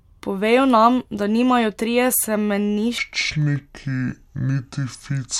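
A speech clip where, from about 2.98 s through to the end, a section at the wrong speed kicks in: it runs at roughly 0.62x, so it drags and drops around ten semitones deeper in pitch. Most likely it was played back against the wrong clock.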